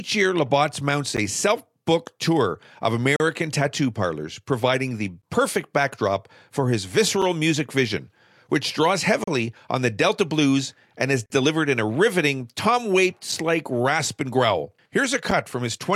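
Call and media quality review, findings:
Gap between stream segments: eight hard-edged silent holes in the speech, spaced about 2 s apart, at 1.17, 3.16–3.20, 5.22 (before "perfect backdrop for his"), 7.22 (before "music vision which draws"), 9.24–9.28, 11.26–11.30, 13.32 (before "like rasp and growl") and 15.31 s. Durations range from 6 to 42 ms. Component: segment timestamping or packager. Each boundary leaves a timestamp gap that the player pads with silence. No audio is lost.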